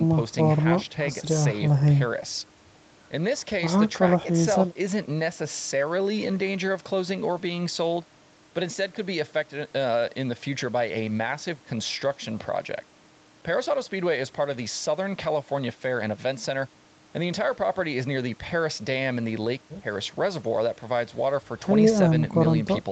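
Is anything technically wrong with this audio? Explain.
No, nothing technically wrong here.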